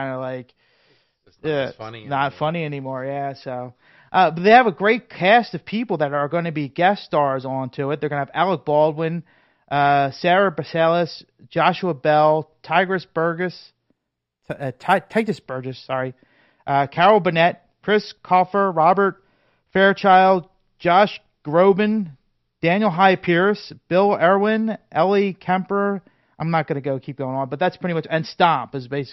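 From 13.91 to 15.42 s sibilants gain a faint metallic shimmer. This is imaging from linear upsampling: crude straight-line interpolation left mirrored spectrum copies between 6 and 12 kHz.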